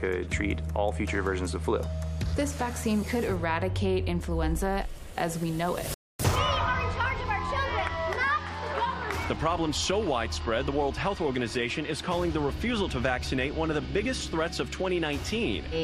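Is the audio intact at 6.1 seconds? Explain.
No. The sound drops out completely from 5.94 to 6.20 s, a playback stall of about 254 ms that cuts it off mid-flow before it resumes. The likely cause is the player running short of data or its thread being blocked, leaving the output silent until it recovered.

Right after, from 6.20 to 8.74 s, the audio runs fast and sounds slightly raised in pitch, by roughly one and a half semitones, before settling. This is catch-up at higher speed: the player resamples its backlog at 1.1x to win back the lost time.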